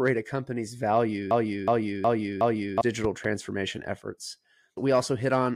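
A speech recording with two technical faults. Just after "a company's", from 1.31 to 2.81 s, a broken-record loop takes over: a 0.37 s fragment repeats exactly four times back to back, most likely because the player or stream stalled and kept resending its last buffered piece, so the audio for that span is lost. Then, between 3.04 and 3.27 s, a loud pop arrives as a double pop, two sharp thumps peaking around 5 dB above the speech, which continues underneath. That points to a likely voltage transient from a switch, connector or driver glitch, shaped by the downstream circuitry.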